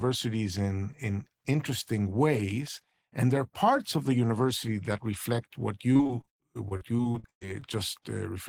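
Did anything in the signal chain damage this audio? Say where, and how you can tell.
Yes. Repeated packet loss (robotic sound) runs from 5.93 to 7.64 s in the speech, a network fault. Packets kept arriving lost or late, and each hole, up to 111 ms, was bridged by stretching the last sound, so about a quarter of that stretch turns choppy and robotic.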